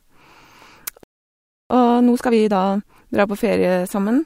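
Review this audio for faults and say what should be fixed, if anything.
A playback stall, likely from the player running short of buffered data or a blocked output thread, silences the speech from 1.03 to 1.70 s, a gap of about 0.67 s.

Time-compressed catch-up follows as the player trims its backlog by splicing out short pieces, so from 1.70 to 3.02 s the speech runs about 1.5 times faster at unchanged pitch.

A larger playback buffer and an output thread that cannot be blocked would prevent the stall, and with no stall there is no backlog to compress.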